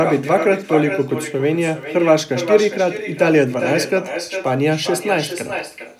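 A speech clip carrying echo with no canceller for its whole length: every phrase returns as a quieter, thinner copy roughly 0.4 s later, about 8 dB below the direct sound. The far end plays the call over a loudspeaker, its microphone catches it, and nothing subtracts it before it travels back. On a spectrogram each syllable's energy pattern repeats, weaker and shifted right by that delay; the waveform shows smaller trailing bursts filling the gaps between utterances.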